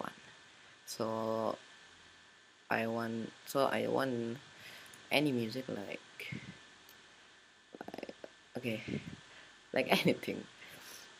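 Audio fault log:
There is no fault in this audio.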